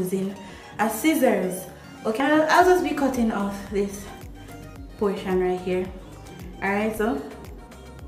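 At 0.72 s, 2.2 s, 3.4 s and 6.98 s the audio jumps forward, losing roughly 20, 70, 20 and 40 ms, with no gap of silence. This is likely a dropped buffer (overrun), where unread samples were overwritten and the surrounding audio spliced together.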